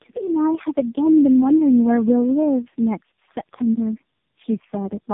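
From start to finish the speech sounds rough, muffled and warbly, with nothing above about 3.6 kHz. This is tandem speech coding: the call was decoded and re-encoded by three low-rate speech codecs in a row, each one compressing the already damaged output of the one before. The layered artefacts point to a chain like G.729A at 8 kbit/s, then AMR-NB at 7.4 and 5.15 kbit/s, joined by G.711 A-law links.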